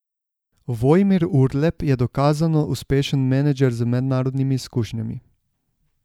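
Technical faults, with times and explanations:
No technical faults detected.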